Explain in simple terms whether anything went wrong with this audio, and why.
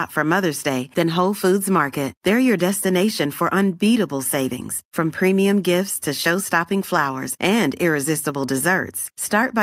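Listening through the recording, nothing stood out as having gone wrong with the speech.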